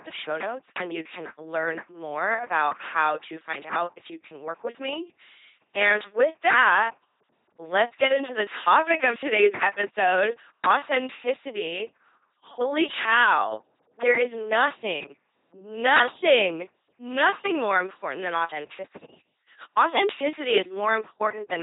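A buzzing, mechanical robot quality runs through the whole speech clip, with stray buzz or hiss where voiced and unvoiced sounds get confused, and nothing above about 3.8 kHz. This is heavy LPC-10 vocoder damage: at 2.4 kbit/s, each moment is resynthesised as either pulse-driven or noise-driven through a short vocal tract filter.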